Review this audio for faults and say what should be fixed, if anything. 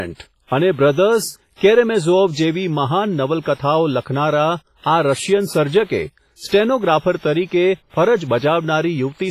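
The whole recording sounds washy and ringing, with hiss that breathes with the speech and no content above 15.3 kHz. This is likely WMA compression at a low bitrate near 24 kbps.

From 1.55 to 1.61 s, a short hiss precedes an attack. This is pre-echo: quantisation noise smeared across a block fills about 59 ms before the onset.

To prevent both, encode at a higher bitrate or use a lossless format.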